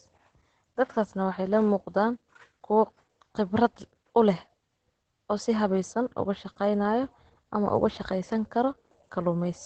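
Throughout the speech, the sound is muffled and hoarse, with a faint robotic edge and nothing above 8.9 kHz. This is Opus voice compression. The SILK coder, running in wideband mode, codes the excitation coarsely, which fits a low bitrate around 12 kbps.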